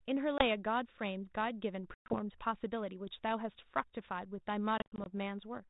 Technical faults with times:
0.38-0.45 packet loss on an ADPCM call
1.94-2.14 packet loss on an ADPCM call
4.79-5.07 packet loss on an ADPCM call

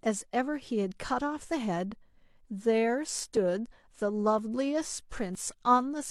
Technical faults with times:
1.40-1.43 overlap between stream segments
3.37-3.41 overlap between stream segments
4.38-4.42 overlap between stream segments
5.35-5.38 overlap between stream segments

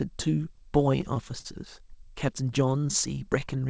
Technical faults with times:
0.78-1.47 repeated stalls (stutter)
2.65-3.57 jitter buffer slow-down

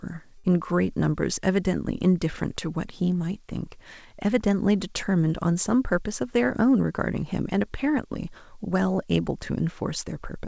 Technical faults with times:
0.38-0.47 burst of packet loss

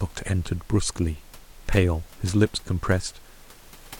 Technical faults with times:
none

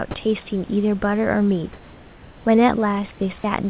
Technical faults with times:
1.73-2.45 comfort noise in place of the background

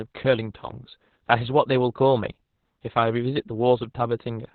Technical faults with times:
0.00-4.55 Opus voice compression

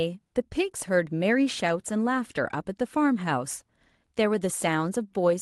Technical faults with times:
none

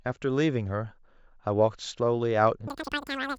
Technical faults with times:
2.67-3.39 wrong sample rate

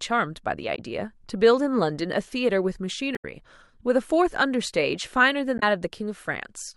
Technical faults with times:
0.75-0.79 damaged data in a compressed stream
3.15-3.24 damaged data in a compressed stream
5.58-5.63 damaged data in a compressed stream

